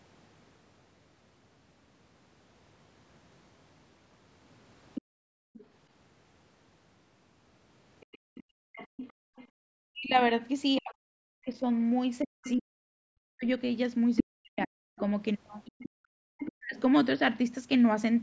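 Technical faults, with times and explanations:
4.95 to 5.66 s, 8.01 to 9.47 s, 12.43 to 12.53 s and 14.16 to 16.48 s, other side's voice leaking through: a second voice sneaks in underneath, around 15 to 20 dB down in the early bits and only about 5 dB below by the last stretch. It's likely loudspeaker playback the echo canceller didn't fully scrub out.
5.02 to 5.54 s and 8.18 to 9.61 s, background gated by the echo canceller: the room tone suddenly sinks, by about 37 dB and then about 35 dB, for roughly half a second and most of a second in total. That's the canceller clamping the mic while the far end plays, then releasing.
9.89 to 16.77 s, speech suppressed in double talk: the talker's own speech keeps dipping and breaking up, falling as much as about 40 dB and adding up to around 3 seconds lost. It's likely both sides talking at once, so the canceller ducked everything, the near talker included.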